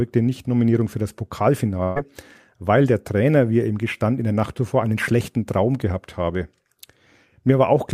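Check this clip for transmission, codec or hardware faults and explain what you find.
One fault is present: a burst of packet loss from 1.83 to 1.98 s, just before "weil der". Several packets arrived too late or not at all. The receiver stretched the last sound for about 120 ms and faded it. About 120 ms of audio is then skipped.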